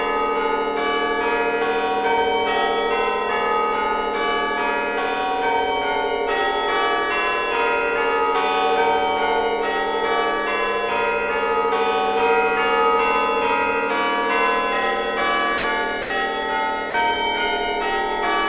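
Three short gaps where the sound gives way to flat, steady hiss, at 15.58 s for 60 ms, 16.02 s for 80 ms and 16.90 s for 40 ms, are likely sound dropped by the voice detector, with comfort noise filling in. Unlike packet-loss concealment, nothing is smeared or repeated: the sound is simply replaced by even noise, then resumes cleanly. The band stops at 4 kHz, which fits a G.711 mu-law call path.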